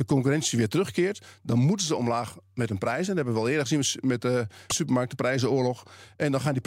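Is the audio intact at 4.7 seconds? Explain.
No. Damaged data in the compressed stream hits 4.66 to 4.72 s. The decoder misreads the frames there and loses sync, giving a brief glitch.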